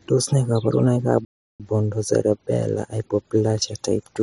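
The player most likely ran short of buffered data or had its playback thread blocked, causing a playback stall from 1.25 to 1.60 s. The speech cuts off mid-flow into complete silence for about 350 ms before output picks up again.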